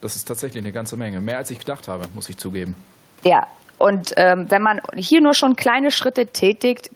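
After "habe muss ich zugeben", from 3.1 s to the end, there is automatic gain falling. The gain control judged the input too loud or its background noise too strong and lowered its gain gradually, so the speech and the room noise fade together. On the waveform the envelope narrows steadily, and on the spectrogram the noise floor dims as well. The level change near 2.5 s is different: it is the talker moving relative to the microphone, not a system fault.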